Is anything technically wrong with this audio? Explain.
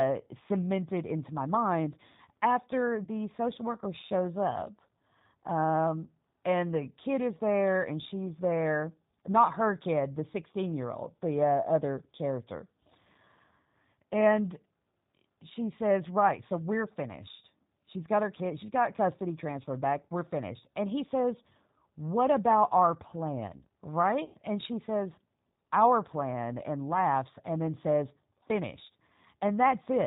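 Yes. The whole speech clip has been through the G.729 codec, and two dropouts have been patched over by its packet loss concealment.

The G.729 codec damage is plainly audible throughout. The coder rebuilds each 10 ms frame from a vocal tract filter, a pitch predictor and a few sparse pulses at 8 kbit/s, which fits the G.729A variant, so the voice comes out rough and slightly synthetic. Nothing survives above 4 kHz, and on a spectrogram the energy stops at a flat ceiling there. Harmonics look smeared rather than crisp.

VoIP packet loss concealed by the speech codec appears twice. The first is from 3.04 to 3.09 s, between "into my mind after" and "social worker shows up", and it points to about 30 ms of lost audio. The second, from 24.25 to 24.37 s, is longer and points to about 90 ms lost. In each gap the decoder repeats its last pitch and filter at falling gain, so the sound smears into a fading buzzy tone or coloured noise. 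Because each frame builds on the previous one, the voice stays weak for a short while after real packets resume. A waveform shows a decaying stretch in place of normal speech, and a spectrogram shows a frozen, steady stretch that fades out.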